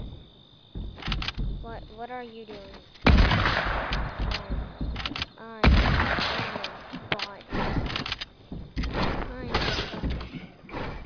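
Nothing in this one trips an alarm, and there's nothing here worth flagging as a technical fault.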